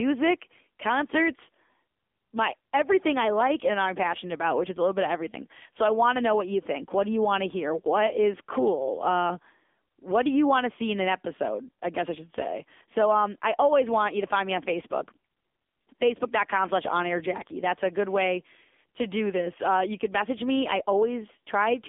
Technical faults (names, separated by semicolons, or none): AMR narrowband mobile codec